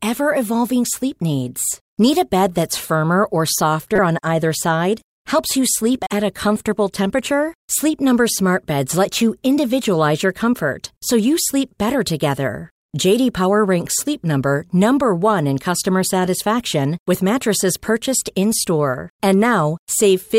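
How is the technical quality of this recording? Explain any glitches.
The recording has two short decoding glitches. At 3.96 to 3.99 s, after "bed that's firmer or", and at 5.97 to 6.07 s, before "at a comfortable temperature", a corrupt frame was decoded: damaged bits gave wrong gains and codes, so energy lands at the wrong frequencies. The first, one frame long, is the louder of the two. The second, about three frames, is quieter, around -10 dBFS. Unlike a dropout, foreign sound replaces the speech.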